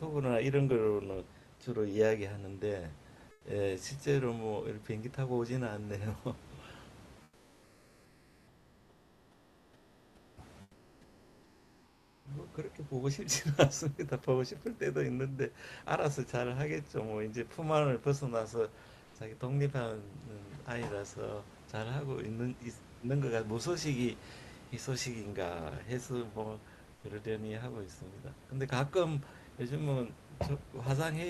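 Comfort noise in place of the background at 3.31–3.45, 7.23–10.37, 10.61–12.25, 19.03–19.15 and 26.95–27.03 s: in pauses the real room noise becomes steady, featureless hiss, about 1 to 8 dB quieter, likely from Opus discontinuous transmission.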